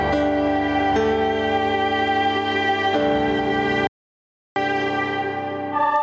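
A short music recording with gain pumping throughout and one audio dropout to silence. The pumping swings the gain by roughly 10 dB, so loud and soft passages sit squashed together. This is likely input gain set far too high with a fast limiter or compressor clamping down on the peaks. From 3.87 s to 4.56 s the music cuts out completely for about 0.69 s and then resumes mid-flow. The gap is silent with no room tone at all, which separates it from a quiet passage or a fade. It likely comes from the input being lost, through a disconnected device, a failed link or a brief mute, while the recorder kept writing silence, so whatever played in that span is gone. The call microphone processing it passed through leaves nothing above 8 kHz.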